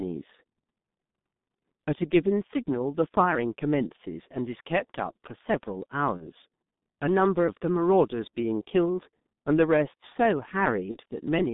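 Across the whole recording the speech carries heavy G.723.1 codec damage. Nothing is heard below about 150 Hz or above 3.7 kHz, and the coarse, slowly updated voice model, which fits a rate near 6 kbit/s, leaves the voice hoarse and consonants smeared. Unlike plain band-limiting, the roughness persists inside the band.

VoIP packet loss concealed by the speech codec occurs at 6.17–6.28 s, 8.30–8.33 s and 10.91–10.97 s. Each gap is about 30 ms, which points to one lost frame. The decoder repeats its last pitch and filter at falling gain, producing a brief buzzy or noisy smear rather than silence or a click. At 6.17 s the weakened sound lingers to 6.28 s as the decoder recovers.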